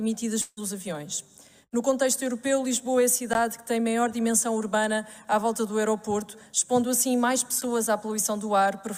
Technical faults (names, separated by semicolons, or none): long network dropout